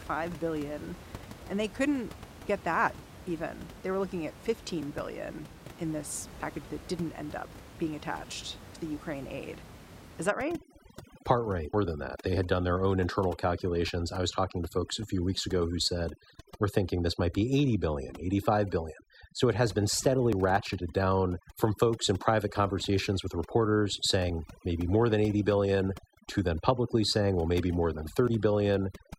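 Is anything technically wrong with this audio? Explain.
Yes. The recording has three kinds of fault.

Audio missing between chunks occurs at 6.43 s, between "billion in this" and "that didn't end up", and again at 10.4, 12.38, 16.35, 20.33, 24.3 and 28.28 s. Each is a sudden skip of roughly 30 ms, with the speech on either side butted together and no silence between them. The skips recur about every 4 s. That regular spacing points to audio being handled in 4-second blocks, with a small piece likely dropped each time one block closes and the next opens.

Overdone noise removal runs from 10.27 s to the end of the clip. Before that point, room noise sits about 18 dB below the speech. From 10.27 s that background drops and breaks up into twinkling, warbling specks. This is what happens when spectral noise reduction is set too aggressively. Frequency bands that fall close to the estimated noise are pushed down hard, and the quieter components of the speech are removed along with the noise.

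A stream segment skipped appears between 11.73 and 11.75 s. There is an abrupt forward jump with a small blip at the join. Its likely cause is a segmented stream in which one segment failed to load, so the player moved straight on to the next one and left a gap in the programme. It falls inside the stretch already affected by the noise reduction.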